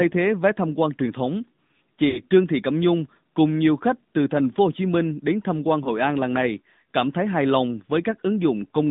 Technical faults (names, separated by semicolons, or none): AMR narrowband mobile codec; lost AMR speech frames